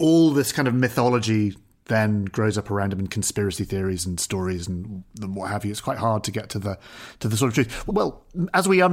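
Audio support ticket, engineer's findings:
No faults found in playback.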